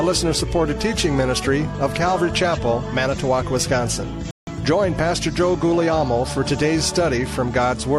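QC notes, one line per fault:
4.31–4.49 s, Bluetooth stall: the sound cuts to silence for 163 ms, then resumes. Likely the headphone buffer ran dry while delayed packets were resent.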